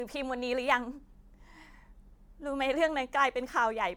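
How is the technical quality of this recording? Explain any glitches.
The quality is compromised by generation loss throughout. The speech was likely re-encoded as MP3 about seven times, at a rate that fits 128 kbit/s, each pass requantising on a shifted frame grid. The result sounds swirly, hollow and smeared, with blurred attacks and nothing above 19.9 kHz.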